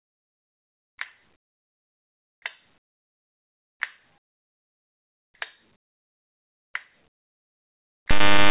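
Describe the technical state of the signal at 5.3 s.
Comfort noise in place of the background runs from 4.18 to 5.34 s, so 5.3 s sits near the end of that 1.16 s stretch. The real background, about 53 dB below the loudest sound, gives way to a steady, featureless hiss roughly 27 dB quieter, with its detail gone. This is likely discontinuous transmission: the sender went silent and the receiver filled the gap with synthetic noise, band-limited like the rest of the call at 4 kHz.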